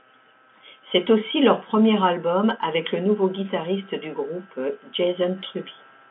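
No technical faults are audible.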